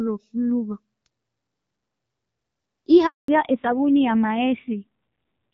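At 3.06 s the speech fades out within a few tens of milliseconds and stays silent until 3.28 s, a hole of 220 ms in which whatever was being said is simply gone. This is a handover gap: the call was being passed from one network to another, and during the switch no speech frames reached the receiver, so there was nothing to decode until the new link came up.

From 3.28 s to the end the speech is noticeably duller and rougher than before, with nothing at all above 4 kHz. This is a fallback to narrowband. The first part of the clip has the clearer HD Voice sound of AMR wideband with only light coding damage, which fits a rate around 12.65 kbit/s. After the switch the call is carried by the older narrowband codec, which cannot reproduce the upper band. The added harshness fits a low narrowband rate of about 5.9 kbit/s.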